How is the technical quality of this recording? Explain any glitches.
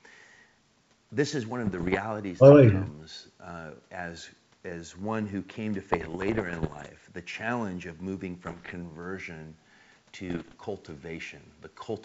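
The recording carries wideband telephone speech that sounds like full-rate G.722, clear up to about 7 kHz, but it is disturbed four times by bit errors on an ADPCM link: from 1.64 to 1.98 s, 5.92 to 6.89 s, 8.45 to 8.74 s and 10.28 to 10.54 s. Around one bit in a hundred is corrupted. Each flipped bit also throws off the decoder's step size and prediction, so the damage rings on briefly as pops, gritty bursts and sudden level jumps. Unlike packet loss, the sound never drops to silence or repeats; it stays continuous but roughened.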